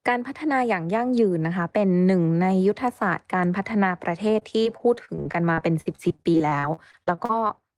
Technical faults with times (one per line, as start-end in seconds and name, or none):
4.39-7.51 repeated packet loss (robotic sound)